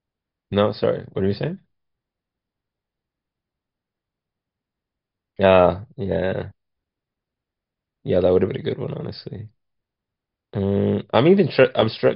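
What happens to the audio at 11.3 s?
Nothing goes wrong at 11.3 s; the speech runs through that moment with no dropout, click, distortion or other fault.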